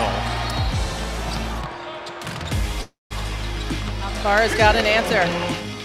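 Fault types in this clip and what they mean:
Call audio freeze: from 2.81 to 3.13 s the last sound stretches into a fading buzz, then 180 ms of silence, likely from held-up packets draining the jitter buffer. Unlike a dropout, nothing is lost: the audio resumes where it stopped, 0.29 s late.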